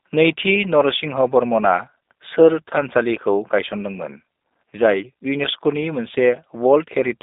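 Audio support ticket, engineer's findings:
G.729 codec damage, whole clip. Speech rough and slightly synthetic, clearly audible. Likely G.729A at 8 kbit/s. Spectrogram: hard ceiling near 3.8 kHz, energy confined to roughly 250 Hz to 3.7 kHz, smeared harmonics. Mechanism: speech resynthesised from vocal tract filter, pitch predictor and sparse pulses per 10 ms frame.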